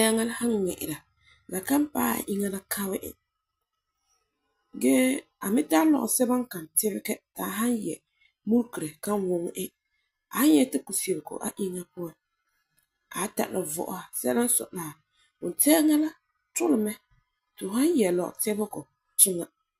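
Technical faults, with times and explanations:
19.18 s, stream segment skipped: near the very end the speech jumps abruptly forward with a short blip, as if a chunk of the recording were simply missing. That's most likely a segment of the stream that failed to load, so the player carried on with the next one.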